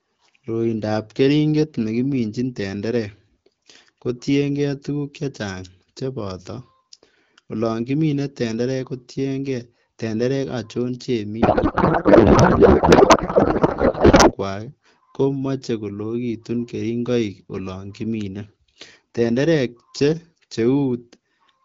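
From 11.42 s to 14.33 s the speech gives way to a codec payload misread. Packets sent in AMR-WB's octet-aligned format are being read as bandwidth-efficient, so the decoder pulls parameters from the wrong bit positions. The result is garbled noise and warble that barely tracks the speech. On a spectrogram, harmonics and formants vanish into smeared broadband texture. The waveform loses its syllable envelope and shows an uneven block. Outside that span the HD Voice sound is clear, which fits a rate around 12.65 kbit/s.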